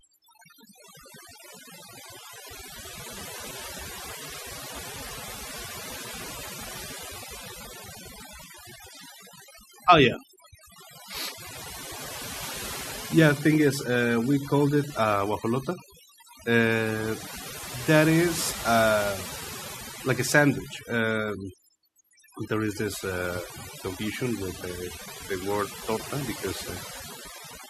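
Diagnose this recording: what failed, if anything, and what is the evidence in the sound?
The failure is overdone noise removal in the noise-reduction processing stage, present for the whole speech clip. The background between phrases drops, dotted with brief twinkling specks. The suppressor is set too aggressively. It pulls individual frequency bands down or off whenever they come close to its noise estimate. That strips out the real noise, but it also removes the quieter parts of the speech spectrum.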